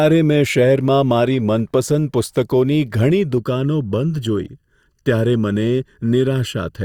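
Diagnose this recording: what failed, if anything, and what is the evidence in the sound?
Channel delay (comb filtering) from 3.38 s to the end: the speech turns hollow and phasey, with fixed notches starting around 700 Hz. One channel runs a little under a millisecond late at the driver or buffer stage, so summing to mono cancels evenly spaced frequencies.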